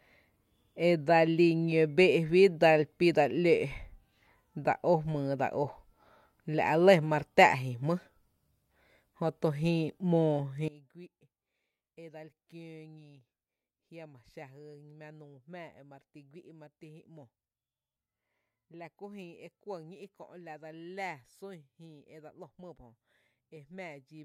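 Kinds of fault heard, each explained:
One channel inverted: from 10.68 s to the end, the speech falls by about 22 dB and turns faint, likely because one stereo channel has reversed polarity, so the shared centre content cancels in a mono sum, leaving only the small difference between channels.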